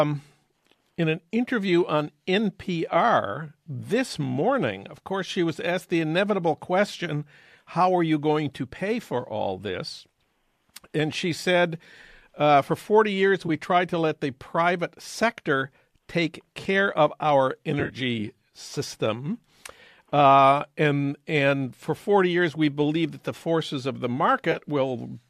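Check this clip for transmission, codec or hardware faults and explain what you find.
Three short dropouts point to AAC frame loss with concealment. The underlying coding sounds light, and is likely low-delay AAC-ELD at around 64 kbps.

AAC frame loss with concealment occurs at 13.47–13.50 s, just before "tried to let the". It occurs again at 17.80–17.96 s, after "take care of our", and at 24.52–24.57 s, after "the forces of the". In each case, lost frames are patched from the last good spectrum. The first and last patches sound like brief smeared, phasey blurs. The middle one is scattered across about 120 ms, with the longest lost run roughly 40 ms.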